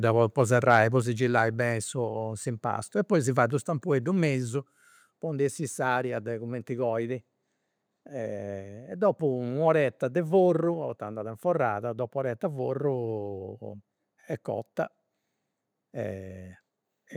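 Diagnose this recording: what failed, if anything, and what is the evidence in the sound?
A harsh, crackling edge flares on the loudest syllable between 0.71 and 0.77 s, where the peaks sound squared off rather than rounded. That is microphone overload, and the stage is most likely the analogue-to-digital converter: the input gain was set so high that the waveform tops pushed about 2 dB past full scale and were sheared flat, affecting around 2 percent of samples in that stretch and adding the gritty distortion heard there.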